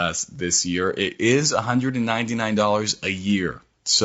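Low-delay AAC compression runs from start to finish, its grain plainly audible in the speech. The cause is likely the AAC-ELD coder used for video calls, at a setting that fits a bitrate around 32 kbps. Its short frames blur the pitch harmonics and spend bits inefficiently, so the voice turns rough and grainy, with noise filling the gaps between harmonics and a dulled or synthetic top band.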